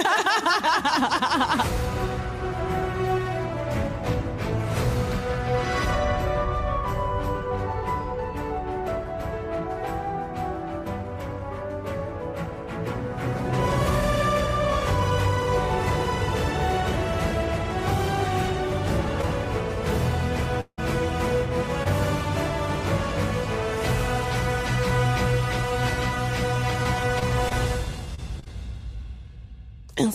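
At 19.21 s there is a short concealed packet loss: about 20 ms of audio never arrived, and the receiver covered the hole by extending the preceding sound before blending back in. It is heard as a quick smear or wobble. On a spectrogram the harmonics or noise bands run briefly flat and unchanging. The waveform shows a short stretch that repeats the previous cycles instead of following the real signal.

At 20.61–20.79 s the sound turns into a fading continuation of itself, then drops to about 60 ms of silence before resuming further on, with roughly 160 ms missing. This is likely a long network dropout, where the concealment ran out and only silence remained. On a spectrogram the spectrum smears and decays into a blank vertical band. In the waveform the envelope tapers down to a flat line before the signal abruptly returns.

A second short concealed packet loss at 21.83–21.87 s behaves like the first. 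About 20 ms is lost, and the smear is slightly longer, near 17 ms.

From 26.83 to 28.47 s come scattered short gaps, roughly seven separate losses of up to about 30 ms each, concealing around 7% of that stretch. They sound like intermittent hiccups and ticks over otherwise continuous sound. A spectrogram shows several narrow frozen or blurred slices spread through the span. The waveform carries small repeated-cycle patches at irregular intervals.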